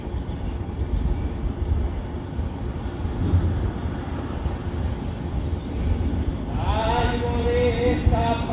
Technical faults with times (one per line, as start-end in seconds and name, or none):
none